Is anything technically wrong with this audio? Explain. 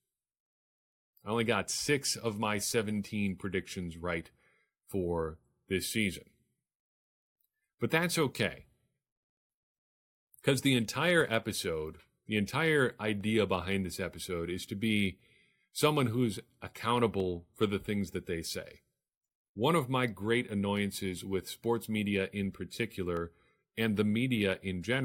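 Yes. From 7.21 s to 23.17 s the speech carries periodic USB or driver dropouts, spaced evenly every 2.0 s, about ten in all. Each is a gap of around a millisecond where the samples are replaced by silence, most likely because a background task stalls the USB bus or audio driver at a fixed interval and the stream is starved. The result is a regular tick or small pop, audible only while speech is present.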